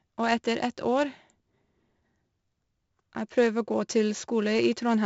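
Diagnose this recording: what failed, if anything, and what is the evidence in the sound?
Codec stage: 4-bit ADPCM compression throughout. Gritty hiss rides every loud syllable, and nothing sounds above 7.7 kHz, which fits 4-bit samples at about 64 kbps.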